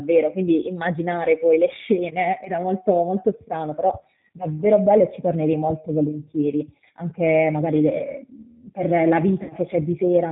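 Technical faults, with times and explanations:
Throughout: G.729 codec. The speech has been rebuilt by a low-rate model, and the damage is plainly audible. The decoder shapes each short frame with a vocal tract filter and a pitch predictor, then excites it with a few sparse pulses. That leaves the voice rough and slightly synthetic. Nothing above 4 kHz survives, so sibilants sound dull. The sound fits an 8 kbit/s G.729A stream.
9.43 to 9.54 s: VoIP packet loss concealed by the speech codec. About 60 ms of audio goes missing here, which fits three lost packets. The decoder fills the gap by repeating its last pitch and filter, with the gain dropping frame by frame. The voice smears into a buzzy tone or coloured noise that fades. Each frame depends on the one before, so the speech stays weak or distorted for a short while after real audio returns.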